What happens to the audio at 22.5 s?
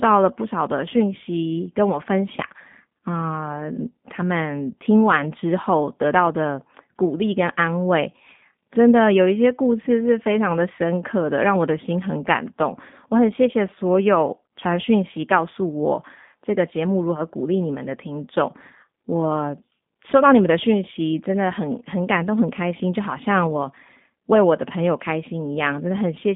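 At 22.5 s the speech sounds narrow, slightly rough and synthetic, with nothing above about 3.7 kHz. That damage runs through the whole recording, not just this moment. It is G.729 codec coding at 8 kbit/s, confined to a telephone band of roughly 150 Hz to 3.6 kHz. The codec models each 10 ms frame with a vocal tract filter, a pitch predictor and a few pulses, so the speech stays intelligible but plainly audibly degraded.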